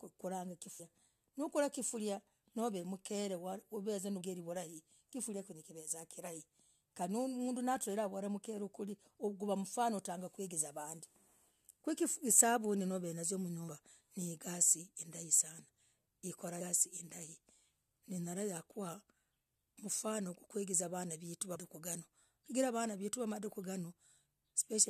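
At 0.79, 4.20, 13.67, 16.60 and 21.55 s the speech lurches forward. These are compressed frames skipped: whole frames never reach the output, so roughly 150 ms of speech vanishes at 0.79, 16.60 and 21.55 s and about 100 ms at 4.20 and 13.67 s, consistent with losing around five to seven frames of 21.3 ms each. Unlike a dropout, no silent gap appears; the speech simply jumps ahead.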